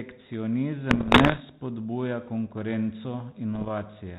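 From 0.90 to 1.41 s, and again from 3.55 to 3.69 s, bit errors on an ADPCM link break into the speech, denser in the first burst at about one or two percent of bits. Each flipped bit throws off the decoder's step size and prediction, so it rings for a few milliseconds as rough pops and brief level jumps. Packet loss would instead leave gaps or smeared repeats. Beneath this, the band-limited G.726-style coding at 32 kbit/s adds only light damage.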